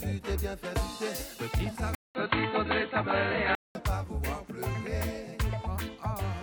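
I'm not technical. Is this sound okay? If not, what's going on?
No. From 1.95 to 3.75 seconds there's an input switched to a poorer device: after a brief silence of about 0.2 seconds, the sound turns dull and muffled, shifts in loudness and picks up faint background noise, likely because recording jumped to a lower-quality microphone.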